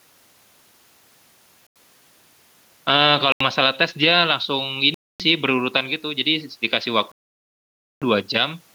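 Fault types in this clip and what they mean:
Bluetooth stall: The speech cuts abruptly to dead silence four times and then resumes. The gaps last about 90 ms at 1.67 s, 80 ms at 3.32 s, a quarter second from 4.94 to 5.20 s, and nearly a full second from 7.12 to 8.02 s. The likely cause is radio interference holding up packets to the headphones, so their buffer ran empty and playback paused until the resent data arrived.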